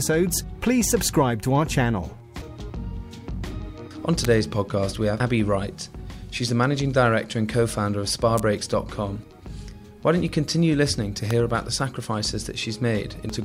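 At 4.25 s a sharp snap sits on top of the sound, with matching snaps at 8.38 s and 11.31 s. These are electrical switching spikes, likely brief arcs from a nearby switch, motor or static discharge that the audio line picked up. Between and after them, at 5.20 s, 9.23 s and 13.30 s, short blips mark damaged data in the compressed stream. Corrupted bytes there cause the decoder to misread its frames and lose sync until it finds the next valid frame header.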